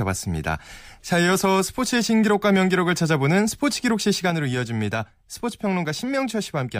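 A gain setting was likely applied without a ramp at 4.30 s, changing the digital level from one sample to the next. This sudden gain jump drops the speech and its background noise together by about 5 dB, and both stay lower until the end.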